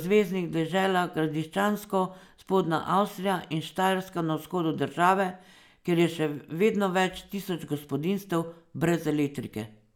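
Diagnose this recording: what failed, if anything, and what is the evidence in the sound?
Nothing in the recording points to a failure at any stage of the chain. The speech gives no audible evidence of a fault that would need diagnosing.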